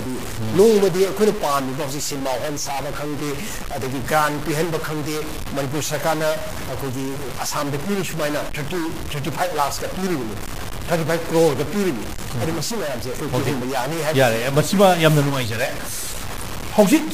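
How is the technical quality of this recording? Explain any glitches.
The recording has a single, persistent fault. A stuck bit runs for the whole clip, most likely from a converter or data line holding one bit fixed. Roughly half the samples shift by that bit's weight, about -25 dBFS. This gives a harsh, buzzy distortion, and quiet passages fill with noise. Unlike clipping, it doesn't depend on loudness, so the quietest moments are degraded too.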